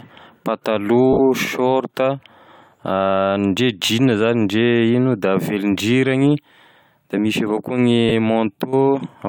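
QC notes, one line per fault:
1.13–1.20 s, 3.85–3.89 s, 8.09–8.12 s, lost LE Audio frames: 60, 40 and 20 ms gaps, fitting runs of 10 ms frames. The LC3 decoder repeats the last spectrum with scrambled signs, smearing tonal speech into brief noise. The longest gap starts fading as concealment decays.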